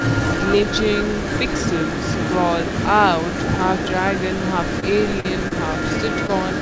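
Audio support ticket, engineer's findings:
Echo leak, full clip 0 to 6.61 s: a distinct delayed copy of the speech trailing by about 198 ms, strong, only a few dB under the direct speech. Likely far-end loudspeaker pickup with incomplete echo cancellation. Separate repeat rather than a diffuse reverb tail.

Short concealed packet loss at 4.80, 5.20, 5.48 and 6.27 s: brief smears or wobbles, 20 to 40 ms each. Receiver decoder bridged missing packets by extending the prior sound, then blended back. Filled gaps, no silent dropouts or clicks.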